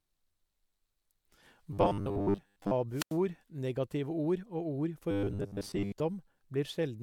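Speech with two distinct faults. From 1.73 to 2.72 s and again from 5.11 to 6.0 s, the voice turns into a rigid, metallic robotic sound from repeated short buffers: a fixed 100 Hz buzz rides over the speech, with most of each stretch made of repeats. The likely cause is audio arriving too slowly, so a segment of about 10 ms is looped in place of the skipped material. Between 2.91 and 3.18 s there is a wireless microphone squelch dropout: hiss rises as the radio signal fades, then the receiver's squelch mutes the output for about 89 ms before the voice comes back.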